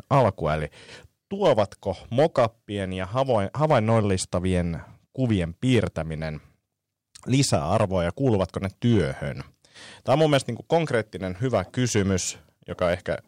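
Hard clipping runs through the whole of this speech recording: the signal reaches some stage of the chain about 6 dB hotter than that stage can carry, so every peak that crosses the ceiling is sliced flat. Only around one percent of the samples are affected, which puts the damage on the loudest moments of the voice rather than spreading it everywhere. Those squared-off tops add harmonics high in the spectrum, heard as brief crackle and grit on the peaks of the voice.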